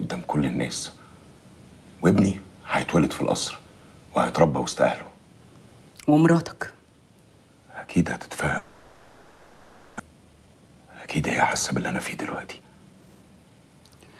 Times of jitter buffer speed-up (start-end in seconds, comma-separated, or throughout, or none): 10.09-11.08, 12.46-13.81